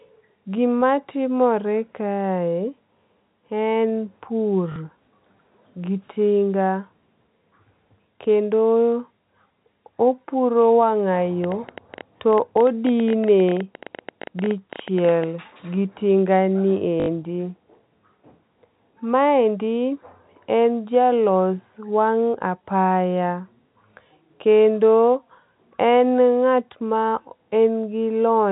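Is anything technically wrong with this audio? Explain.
Yes, there are two kinds of fault.

Packet loss with last packet repeated occurs at 4.72 to 4.76 s (40 ms) and at 17.0 to 17.08 s (80 ms), just after "gi tingani". Missing packets were filled by replaying the previous one, and the repeats, which fit 20 ms packets, don't align with the pitch. Each gap is a brief robotic stutter. Each is a run of repeats, not separate ticks.

A train of clicks runs from 11.44 to 15.25 s, ending before "gi tingani". It is about fifty similar pulses at an uneven 11.9 per second, peaking well above the speech, and is likely interference or a faulty connection. These clicks sit on top of the sound, unlike packet-loss stutters, which replace it.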